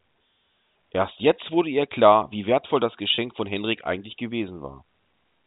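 At 3.15 s, about 30 ms of speech drops out through packet loss with pitch repetition. The receiver repeats the last pitch period, giving a brief held, buzzy tone under the telephone band.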